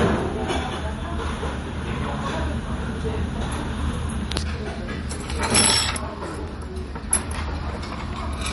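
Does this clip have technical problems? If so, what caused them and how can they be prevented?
Yes. Throughout, the sound is watery and swirly, with smeared attacks and nothing above 11.3 kHz. This is likely MP3 compression at a low bitrate, around 48 kbps. Starved of bits, the encoder cut the treble and let weak frequency lines flicker between frames. Keep a lossless original, or encode at a much higher bitrate.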